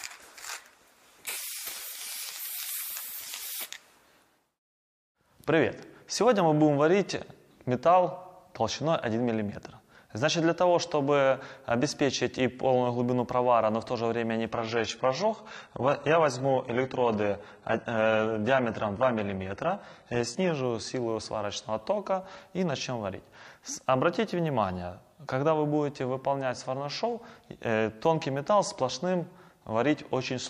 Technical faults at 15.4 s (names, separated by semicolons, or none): adaptive stream at a lower bitrate